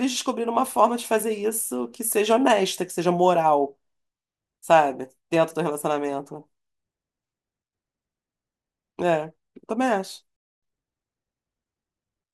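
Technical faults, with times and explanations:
10.36–10.63 s: playback stall. The speech cuts to silence mid-flow for about 0.26 s and then resumes. The player most likely ran short of buffered data or had its output thread blocked, so nothing reached the output until it recovered.
10.63–10.89 s: time-compressed catch-up. Right after the gap, the speech runs at twice normal speed for about 0.26 s, hurried but at unchanged pitch. The player is cutting and cross-fading small segments to clear the backlog the stall built up.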